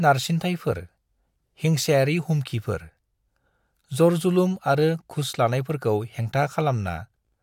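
No technical faults are audible.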